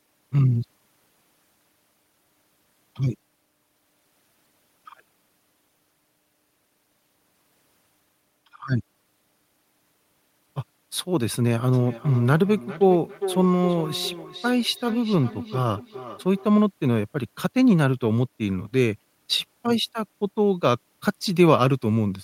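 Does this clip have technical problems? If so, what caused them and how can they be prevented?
Yes. From 11.73 to 16.49 s the speech comes back at roughly 400 ms intervals, each return thinner and more ringing, the loudest about 13 dB below the voice: feedback echo between two devices, where one device replays the other's microphone. Keeping only one device joined per room prevents it.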